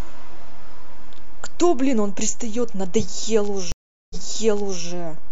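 Speech with two problems. A DC offset runs through the whole clip, shifting the waveform off zero by a constant. You won't hear it as such, but it eats into headroom and shows up as steady energy at the very bottom of the spectrum. Then at 3.72 s there's a stream reconnect: the connection drops, about 0.38 s of silence follows, and a fresh decoder picks up mid-stream. Playback resumes roughly 0.74 s earlier than where it cut, as if the server resent a burst of backlog, so that stretch repeats. The disturbance is over by 4.84 s.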